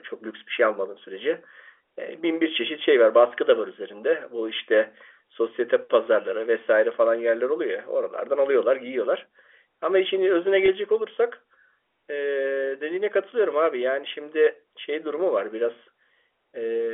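At 10.66 to 10.68 s, packet loss with pitch repetition briefly interrupts the speech. About 20 ms of audio, which fits a single lost packet, was replaced by a repeated pitch period, giving a slightly held, buzzy instant. The waveform shows identical repeating cycles, and the spectrogram shows steady harmonics within the 300 to 3400 Hz telephone band of the G.711 coding.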